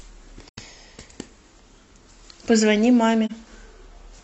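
Speech with AAC frame loss with muting at 0.49–0.58 s and 3.25–3.31 s: the decoder zeroes lost frames, so overlapping windows fade the sound into soft-edged gaps, consistent with roughly two frames and one frame lost.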